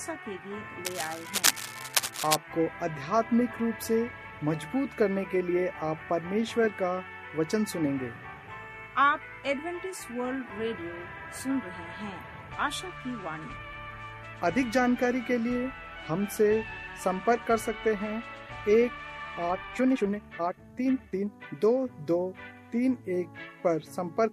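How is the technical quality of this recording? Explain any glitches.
Two faults stand out, one near the start and one near the end.

From 0.85 to 2.36 s there is cable scratch noise. The likely cause is a worn cable, connector or control being moved, so its contact resistance jumps about rapidly. That injects dense, irregular bursts of noise roughly as loud as the sound itself. It comes across as a harsh scratching and rustling laid over the audio for about a second and a half before clearing.

From 19.46 to 21.48 s there is a time-stretched section. Software likely squeezed this stretch to fit a shorter length, running it at 1.82 times normal speed and holding the pitch steady by dropping short pieces of the audio. The pace lurches forward abruptly while the pitch stays the same, so the passage sounds rushed until normal pace resumes.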